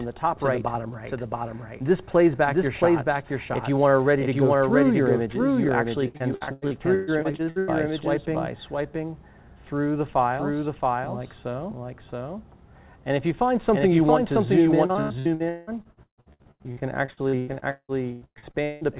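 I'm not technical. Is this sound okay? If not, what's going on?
No. Two problems can be heard. Throughout the clip, everything plays twice: a second copy, just as loud as the first, follows about 0.7 seconds behind, so the sound seems to stutter over itself. This is a doubled audio track. The likely cause is the same audio being picked up a second time through a slower route, or two copies left out of line, and then both mixed together.

From 6.08 to 7.71 seconds, and again from 14.86 to 18.84 seconds, the sound turns choppy and robotic, with bits dropping out. This is repeated packet loss. On a call, audio travels in small chunks, and here many went missing one after another. Each hole is covered by stretching the last bit of sound. Those patches fill roughly 40 percent of the first stretch and nearly half of the second, with holes up to 0.13 and 0.18 seconds long. The muffled, telephone-like tone, with nothing above 4 kHz, is normal for this kind of call connection.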